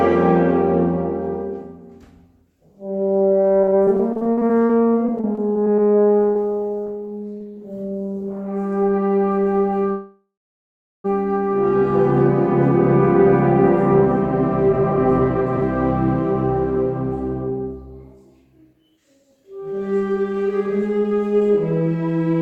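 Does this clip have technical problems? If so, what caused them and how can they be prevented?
Yes. From 3.29 to 7.42 s, repeated packet loss (robotic sound) leaves dozens of holes up to 39 ms, patched by stretching prior sound. Unlike a freeze, about half a second of audio is truly missing. Forward error correction or redundancy would prevent it.

At 9.91 s a call audio freeze holds for 1.13 s, fading to silence for about 0.75 s, then resumes with nothing lost. The likely cause is delayed packets draining the jitter buffer. A more stable network path would prevent it.

A jitter buffer speed-up plays 14.70 to 17.52 s at 120% and 18.58 to 22.35 s at 111%. Pitch stays unchanged, unlike a sped-up tape. Smoother delivery or slower buffer draining would prevent it.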